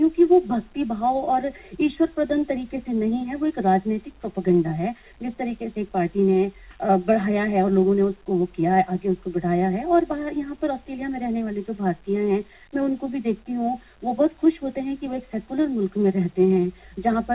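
No technical faults can be heard anywhere in the clip. The audio has passed through a call path whose band stops at 4 kHz, with the narrowband character that points to a telephone codec such as G.711 A-law at 64 kbps.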